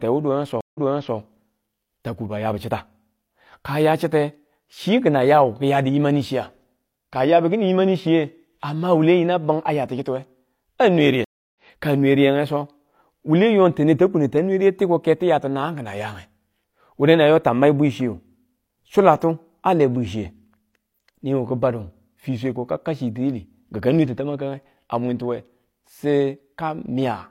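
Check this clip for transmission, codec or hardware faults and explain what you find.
Two stream reconnects break the speech. At 0.61 to 1.17 s, 141 ms of silence precedes a restarted decoder that resumes about 0.42 s earlier, repeating audio. After "aya kichittiwe a nwe" at 11.24 to 11.55 s, 311 ms of silence ends roughly 0.4 s later at "ka nwe riyenge so", skipping audio. Unlike a plain dropout, the stream position jumps.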